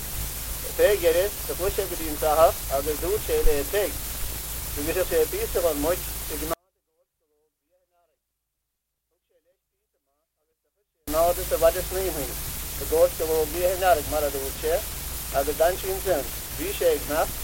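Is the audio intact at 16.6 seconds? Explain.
Yes, at 16.6 seconds the audio is intact, with no dropout, glitch or other fault at that moment.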